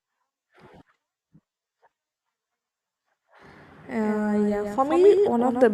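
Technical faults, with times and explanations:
4.03 s to the end, doubled audio track: a second full-band copy of the speech trails the original by roughly 150 ms, about 5 dB quieter, and cuts in abruptly with no decay or room colour. This likely comes from the audio being captured twice, once through a slower path.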